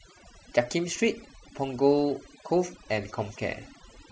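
From the first moment to the last, you can hear overdone noise removal at work. The noise reducer was pushed too hard, so any frequency band sitting close to its idea of the noise floor gets pulled way down or cut entirely, and the quieter bits of the voice get swept out along with the noise. What's left between phrases is near silence dotted with little twinkling specks.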